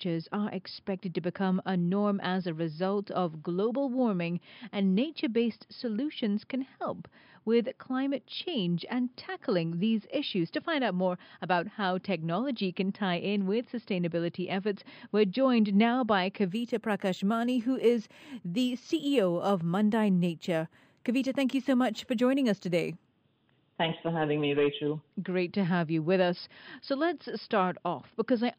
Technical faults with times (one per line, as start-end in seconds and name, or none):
16.48-23.06 imaging from linear upsampling